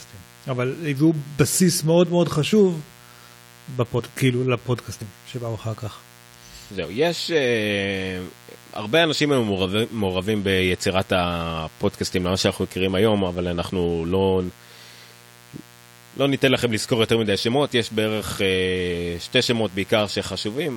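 Mains buzz runs throughout: a raspy 60 Hz buzz with harmonics reaching into the kilohertz range, roughly 25 dB below the speech, from switching spikes leaking into the signal path.

Compressed frames skipped at 2.50–2.53 s, 3.98–4.01 s and 5.00 s: missing or rejected frames make the audio jump ahead by about 20 ms, then 50 ms.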